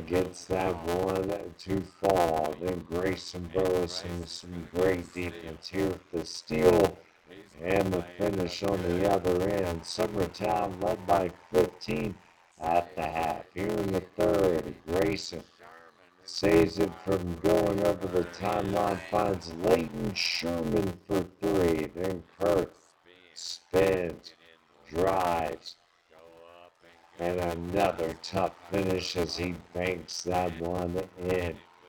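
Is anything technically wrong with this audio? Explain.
Yes. A block size mismatch (padded) runs through the whole clip. One stage delivers shorter blocks than the next reads, and zeros fill the remainder. Each block gets a brief silent gap. That makes a steady 86.1 Hz buzz, which fits 512-sample blocks. The audio plays at 0.625 times normal speed, at roughly its normal pitch.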